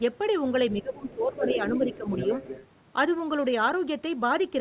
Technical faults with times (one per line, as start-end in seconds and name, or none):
0.73-2.09 speech suppressed in double talk
1.09-1.15 other side's voice leaking through
1.41-2.67 other side's voice leaking through